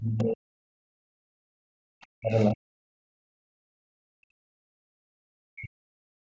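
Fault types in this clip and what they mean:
Speech suppressed in double talk: the talker's level falls sharply, by roughly 40 dB at its deepest, over three stretches from 0 to 1.54 s, 2.17 to 2.82 s and 3.15 to 6.24 s. This is likely the echo canceller failing to separate local speech from loudspeaker echo while both sides talk, so it turns everything down.
Background gated by the echo canceller: the room sound drops out briefly, about 70 ms between 1.82 and 1.89 s, and falls by about 32 dB at its deepest. The canceller clamped the microphone hard while the loudspeaker played, and the background returns once it releases.
Other side's voice leaking through: a faint second voice, roughly 35 dB below the talker, surfaces briefly between 2.01 and 2.07 s. It is likely the far side played on the loudspeaker and left behind by incomplete echo cancellation, and it comes through only as a short scrap.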